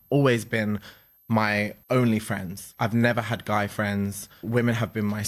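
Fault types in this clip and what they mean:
switching supply whistle: A switching power supply is running in an audible burst mode or beating against another supply, leaving a high, thin whistle under the speech for the whole clip. Its pitch stays nearly steady, wandering only between about 12.36 and 12.44 kHz, at roughly 35 dB below the speech. On a spectrogram it is a narrow horizontal line near 12.4 kHz running edge to edge. On the waveform it is too small to see beneath the speech.
processor overload crackle: From 2.57 to 2.78 s, between "always been my only" and "I've never had guy", the processor repeatedly failed to finish its small audio buffers in time. Around five buffers of roughly 10 ms each were skipped outright, so the audio jumps forward with hard edges at each miss, heard as a short burst of gritty crackle. A spectrogram shows a cluster of thin vertical broadband streaks, and the waveform shows abrupt steps where segments join.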